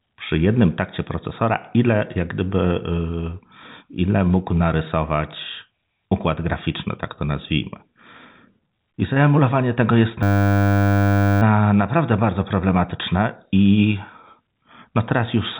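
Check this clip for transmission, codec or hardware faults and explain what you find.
One fault is present, heard against the narrow telephone band of G.711 coding, which passes nothing above 3.8 kHz.

From 10.23 to 11.42 s, between "I zaemulowanie tego jest" and "na naprawdę bardzo problematyczne", the speech becomes a steady 100 Hz buzz. This is a system hang loop: the system froze while the hardware kept replaying one 10 ms buffer.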